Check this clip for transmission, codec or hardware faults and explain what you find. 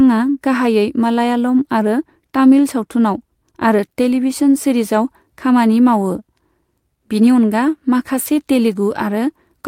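Nothing stood out on listening to the speech in this recording that would point to a transmission, codec or hardware problem.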